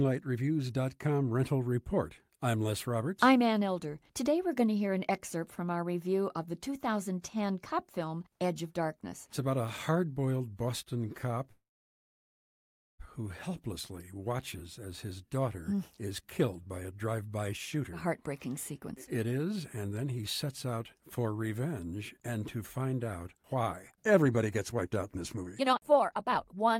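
At 11.51 s the speech stops, and a short buzz fades into about 1.4 s of silence until 13.02 s. This is a call audio freeze. Packets were likely held up and the jitter buffer ran dry. Speech resumes where it left off, with nothing lost.

From 16.41 s, just after "his daughter hmm is", to 21.25 s, the speech runs about 8% fast at unchanged pitch. This is a jitter buffer speed-up, clearing excess delay by dropping tiny pitch-period slices. Roughly 0.4 s is removed before "revenge and to find". A stronger speed-up follows "and to find out" from 23.71 s to 26.75 s. There the speech runs about a third fast, trims around a second, and sounds clearly hurried.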